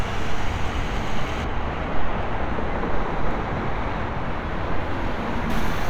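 From 1.44 s to 5.50 s, de-emphasis applied wrongly rolls off the treble: a de-emphasis curve cuts audio that was never pre-emphasised, or cuts it a second time, leaving 10 kHz about 13 dB below 1 kHz. The sound turns dull and muffled, and a spectrogram shows the upper bands fading smoothly over that span.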